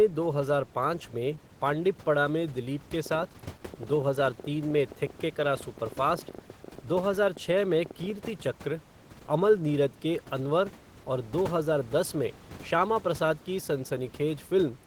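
Throughout, the speech sounds hoarse and faintly robotic. This is Opus voice compression in hybrid mode at only 16 kbps, which codes the excitation coarsely in 20 ms frames.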